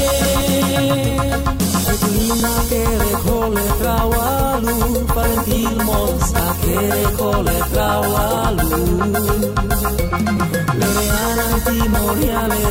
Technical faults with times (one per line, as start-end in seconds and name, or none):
0.41 overlap between stream segments
2.40 overlap between stream segments
4.39 overlap between stream segments
6.38 overlap between stream segments
8.38 overlap between stream segments